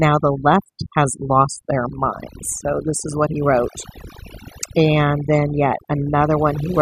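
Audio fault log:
Throughout: overdone noise removal. The noise reducer on this speech was pushed far too hard, so any frequency band sitting close to its idea of the noise floor gets pulled right down or shut off. That takes the background noise down, but it takes the softer parts of the voice with it. You're left with a lowered background full of little twinkly, chirpy specks.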